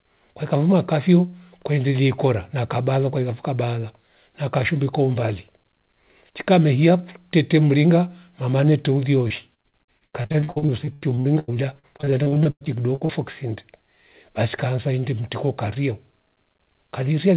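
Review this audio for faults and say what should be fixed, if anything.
From 9.28 to 13.11 s, just after "mehia fyukutete mringa mamane", the speech breaks up into repeated packet loss with a choppy, robotic sound. Dozens of short gaps, the longest about 96 ms, are filled by extending the last sound, so roughly a third of the stretch is concealed. A larger adaptive jitter buffer with forward error correction or redundancy on the lossy link would prevent this.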